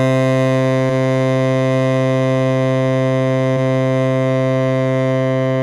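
At 0.89 s and again from 3.56 to 3.59 s, compressed frames are skipped: the music jumps forward by roughly 40 ms, which fits about four missing 10 ms frames.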